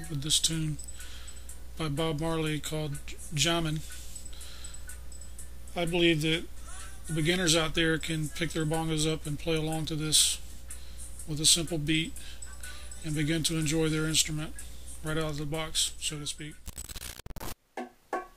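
From 16.66 to 17.52 s a harsh, buzzy distortion appears, consistent with a stuck bit, likely from a faulty data line or converter. Unlike clipping, the error steps by around -30 dBFS throughout the waveform, not only at peaks, so quiet moments fill with noise too.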